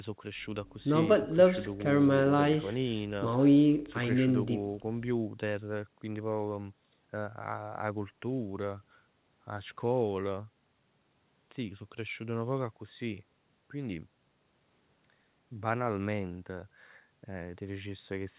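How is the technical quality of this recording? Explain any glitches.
Nothing stood out on listening to this recording; no glitches or other technical problems could be heard.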